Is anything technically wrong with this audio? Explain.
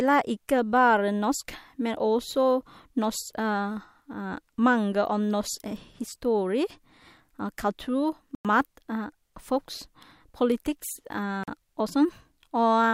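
Yes. The speech has two blocks of digital silence, at 8.35–8.45 s (about 99 ms) and at 11.44–11.48 s (about 43 ms). Samples were replaced by zeros, which points to the output buffer not being filled in time. The second gap fits a 2048-sample buffer at 48 kHz. Each is heard as a short hole. Unlike a fade or a concealed packet loss, the sound cuts abruptly to true silence and back, with no ramp or smeared fill.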